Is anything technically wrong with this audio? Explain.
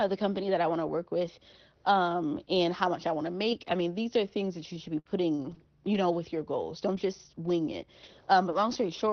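Yes. The sound has three kinds of network fault, heard over an Opus call path that cuts off above about 6 kHz.

From 4.99 to 5.08 s there is a burst of packet loss. The sound is stretched and fades for about 57 ms, then resumes with about 60 ms missing. The receiver concealed the lost packets by extending the last audio.

From 5.35 to 5.42 s a short stall from a late packet holds the sound about 34 ms too long, with a slight buzz or dip. The jitter buffer ran empty while the packet was late, and nothing is skipped.

At 5.39, 5.51, 5.93, 6.95, 7.43, 8.03, 8.51 and 8.69 s, a lost packet was rebuilt from error correction each time. Each rebuild is a 60 ms stretch that sounds rougher and noisier. The decoder played a low-bitrate copy carried in the next packet, so there is no gap.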